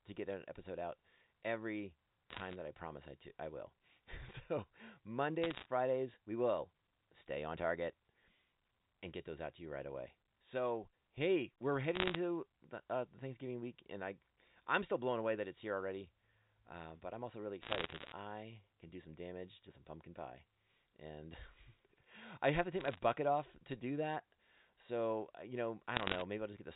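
Bursts of bit errors on a digital phone line occur at 2.30 to 2.56 s, 5.44 to 5.66 s, 11.95 to 12.16 s, 17.62 to 18.12 s, 22.80 to 22.99 s and 25.97 to 26.22 s. Flipped bits, roughly 0.5 to 1 percent, corrupt individual A-law samples, producing sharp ticks and crackle over the band-limited telephone speech.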